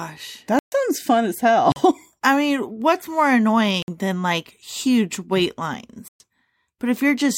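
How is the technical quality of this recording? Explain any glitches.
The speech is interrupted four times by a block of digital silence. There is a 130 ms hole at 0.59–0.72 s, a 40 ms gap at 1.72–1.76 s just after "fun as", a 56 ms gap at 3.82–3.88 s between "I mean what's more" and "than like huge wait", and a 120 ms hole at 6.08–6.20 s right after "than like huge wait". In each gap the sound drops straight out and returns without any fade. All four are long enough to register as short holes rather than ticks. The most likely cause is the program failing to fill its output buffer in time, so those samples came out as zeros.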